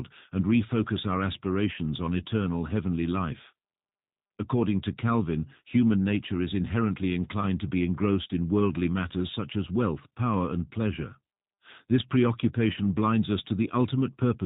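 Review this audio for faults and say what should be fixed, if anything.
G.729 codec damage runs throughout. Nothing above 4 kHz remains. The speech sounds rough and synthetic, which fits 8 kbit/s G.729A rebuilding it from a filter and sparse pulses. To prevent it, record or transmit with a wideband codec at a higher bitrate.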